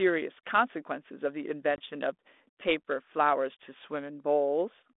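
Packet loss on an ADPCM call hits this speech clip at 1.76 s. About 20 ms, roughly one packet, drops out and leaves a hard-edged silent hole. Because ADPCM sends only the difference from an adaptive prediction, the receiver's predictor and step size lose track of the sender's. The speech comes back with brief, slight distortion, settling by about 1.81 s. The underlying line is 32 kbit/s G.726, band-limited to roughly 250 Hz to 3.6 kHz with light codec roughness.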